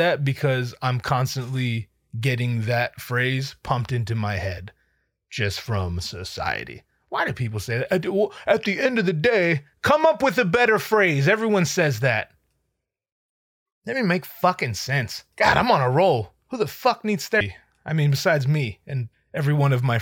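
At 17.39 s the speech is hit by a brief burst of damaged data in the compressed stream. A short run of bytes in the encoded file is corrupted, so the decoder cannot parse the frame there, loses sync and skips forward to the next valid frame header. The result is a brief glitch lasting well under 20 ms.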